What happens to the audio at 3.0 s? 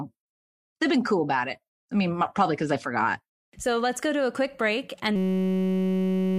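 Nothing goes wrong at 3.0 s; the speech carries through that moment intact, with no dropout, click, distortion or other fault.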